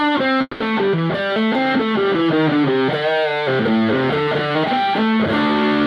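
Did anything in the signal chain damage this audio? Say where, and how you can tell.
Yes: a call audio freeze at 0.41–0.62 s, likely from delayed packets emptying the jitter buffer. A fading 190 ms fill and 30 ms of silence insert a gap without losing any sound.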